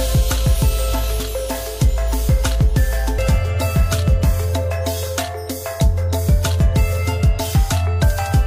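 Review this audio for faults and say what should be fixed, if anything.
Two brief glitches, at 1.20 s and 3.18 s, come from damaged data in a compressed stream: corrupted bytes made the decoder misread those frames and lose sync until it found the next valid frame header. Checksummed transport and verified file copies would prevent this.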